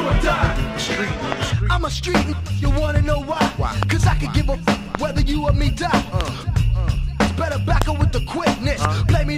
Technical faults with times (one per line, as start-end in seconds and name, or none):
1.32-1.45 loud pop
3.83-3.93 loud pop
4.95-4.97 loud pop
6.21-6.30 loud pop
7.82-7.84 loud pop
8.85-8.87 loud pop